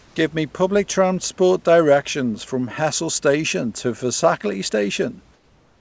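Comfort noise in place of the background appears from 0.00 to 0.16 s and from 5.34 s to the end. The room's detailed background becomes a flat, featureless hiss, about 2 dB and about 4 dB quieter, likely synthetic noise filling pauses left by discontinuous transmission.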